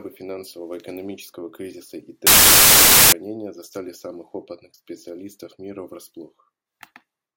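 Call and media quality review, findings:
Samples built from the wrong bytes, 2.27–3.12 s: loud broadband hiss replaces speech for about 0.86 s. Sample reader misassembling bytes (offset, swapped order or misalignment), so low bits dominate. Spectrogram shows a flat full-band block; waveform fills to a dense block well above the speech level.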